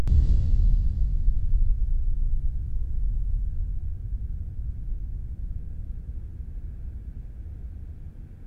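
Nothing in this recording trips up the ear; there's no glitch, dropout or other technical fault to point to anywhere along the way.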